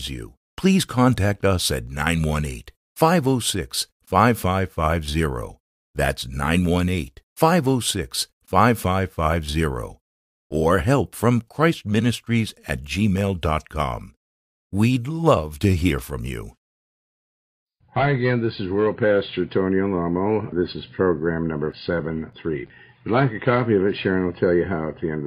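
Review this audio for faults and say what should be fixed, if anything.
A single loud pop at 12.69 to 12.71 s, a few dB above the sound, most likely a voltage pulse from a plug, switch or static. Unlike a dropout, the sound carries on underneath. To prevent it, make connections and switch equipment only while the signal path is muted, and ground the setup properly.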